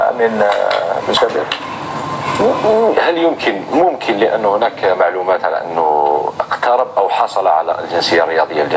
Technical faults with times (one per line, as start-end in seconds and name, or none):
0.00-8.76 gain pumping